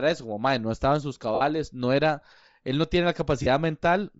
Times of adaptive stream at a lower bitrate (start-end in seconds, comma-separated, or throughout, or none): none